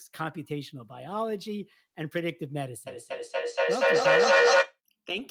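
Speech, with feedback echo between two devices from 2.87 to 4.79 s: sound returns about every fifth of a second and builds to about 11 dB above the speech. A spectrogram shows evenly spaced, thinning copies of each syllable, and the waveform envelope swells.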